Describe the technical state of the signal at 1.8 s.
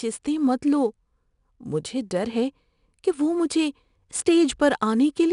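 At 1.8 s the speech carries 4-bit ADPCM compression, present across the whole clip rather than at that instant alone. Each sample is coded as a coarse 4-bit step from a predicted value, so the quantisation error rides along as broadband grit that rises and falls with the speech level, plainly audible here as hiss on the louder syllables. Nothing sounds above 10.6 kHz, which fits a rate near 89 kbps.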